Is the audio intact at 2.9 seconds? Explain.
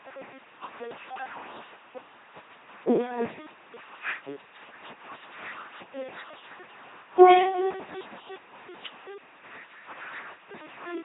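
No: at 2.9 seconds, as throughout, the speech is a buzzy robotic drone with nothing above 3.8 kHz, the sound of an LPC-10 vocoder forcing every instant into pulse or noise excitation, consistent with 2.4 kbit/s.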